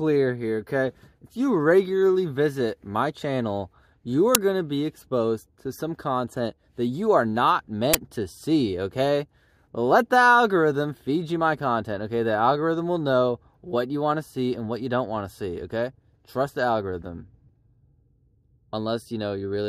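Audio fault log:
4.35 s and 7.94 s, uninitialised buffer: two brief, very loud bursts of harsh digital noise cut across the sound. In each case a block was sent to the output before any audio had been written into it, so leftover memory contents were played as sample values. The first burst lasts about 5.8 ms, which fits a 256-sample buffer. The second lasts about 11.6 ms, which fits a 512-sample buffer.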